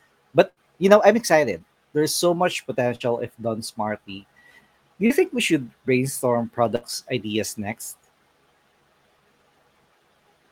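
A held sound that fades and then jumps ahead is a burst of packet loss, heard at 0.49 s, at 2.96 s between "so much" and "if done smartly", and at 6.76 s between "think we should brainstorm" and "ideas next". Consecutive packets were lost or arrived too late, so the receiver stretched the last sound for roughly 50 to 70 ms and skipped about 40 to 80 ms of audio. Brief smears at 1.58 s and 5.06 s, the second just before "think we should brainstorm", are short concealed packet loss, where 20 to 40 ms of missing audio was patched by continuing the preceding sound.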